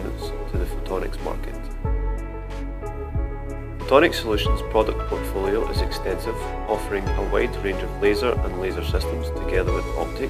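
From 3.89 to 9.89 s the audio shows channel delay (comb filtering): one channel lags by roughly one sample, and the mono sum cancels the top end near 20 kHz, dulling it.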